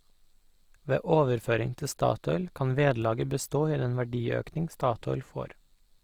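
Throughout, the speech is rough and grainy, likely from Opus compression near 24 kbps. The spectrogram shows noise-filled, smeared bands reaching 20.3 kHz.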